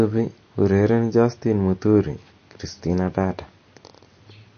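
Throughout, the speech sounds watery and swirly, with nothing above 6.5 kHz, likely MP3 compression at a bitrate as low as 32 kbps.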